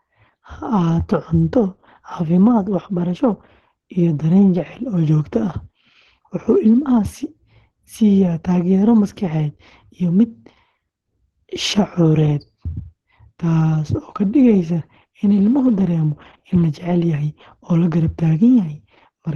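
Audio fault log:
Throughout: Opus compression, muffled and hoarse speech with nothing above 12 kHz, likely from a low-bitrate encoder falling back to hybrid mode.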